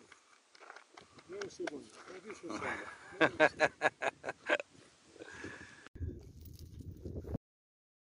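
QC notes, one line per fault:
0.0–5.96 s, input switched to a poorer device: Nothing is heard above 10.5 kHz, so the sound is dull and boxy. A background noise sits roughly 30 dB below the signal. At 5.96 s there is an 80 ms silence. After it the top end returns, the noise changes, and the level shifts by around 5 dB. The likely cause is the input moving from a narrower-band microphone or headset profile back to a fuller one. Each device has its own band, tone, gain and noise floor.
7.36 s, cut-off end: The audio stops abruptly in the middle of a sound. There is no decay or fade. It drops straight to digital silence, which holds until the clip ends at 8.18 s. The hard edge can give a click. This happens because the final buffers were never written or played out. The waveform simply ends where the last saved buffer did.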